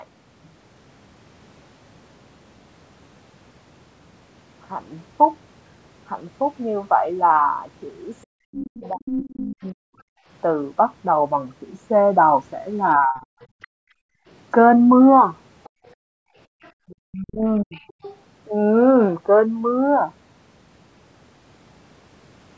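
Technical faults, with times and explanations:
8.27–9.78 s, 12.97–13.33 s and 16.88–17.78 s, speech suppressed in double talk: the talker's level collapses by roughly 40 dB in pieces, likely because the echo canceller mistook simultaneous talk for echo. The waveform thins to near-flat patches and the spectrogram shows the harmonics abruptly fading.
8.61–9.36 s, 13.62–13.67 s and 15.64–18.17 s, other side's voice leaking through: a second, fainter voice sits under the talker, about 10 dB down in the first stretch, far lower in the brief scrap and around 25 dB down in the last. On a spectrogram it shows as a separate faint harmonic pattern.
10.06–10.27 s and 13.67–16.6 s, background gated by the echo canceller: room tone drops by about 40 dB while the loudspeaker plays, briefly in the first case and in gaps totalling about 1.5 s in the second. The waveform's noise floor falls to silence and the spectrogram goes blank.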